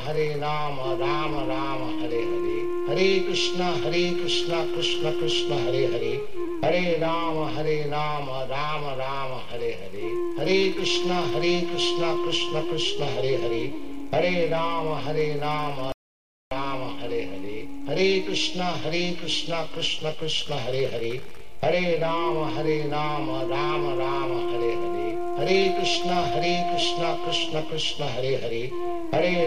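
At 15.92 s the sound drops out to silence and only comes back at 16.51 s, so roughly 0.59 s is simply gone. It's plain silence, no room tone at all, which points to a likely lost input, with the recorder carrying on writing silence.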